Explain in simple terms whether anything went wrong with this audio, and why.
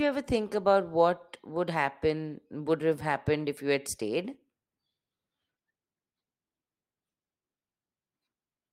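Nothing went wrong here; no technical faults are audible.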